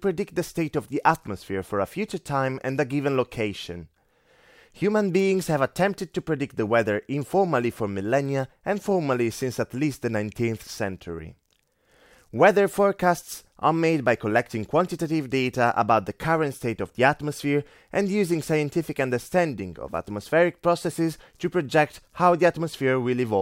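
No technical fault can be heard anywhere in the recording; the signal stays continuous throughout.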